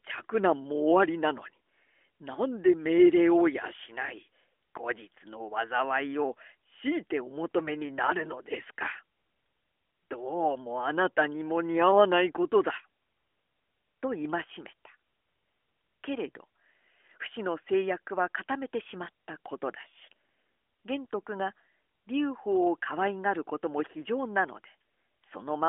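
Nothing here is technically wrong; it's a speech clip that comes through fine, with no faults to point to anywhere along the way.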